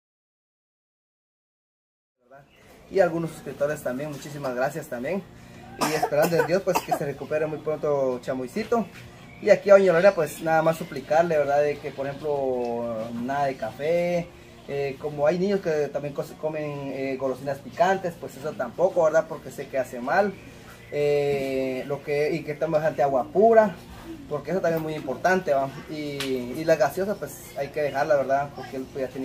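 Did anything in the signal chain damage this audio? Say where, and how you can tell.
No, nothing along the chain has damaged this audio. The opening is a smooth fade-in that begins around 2 s and reaches full level by 3.25 s, rising gradually without any click or hard edge, as an editor would shape it.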